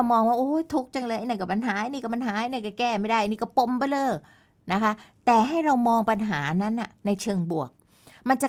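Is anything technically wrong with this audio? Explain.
No, nothing is technically wrong with this audio.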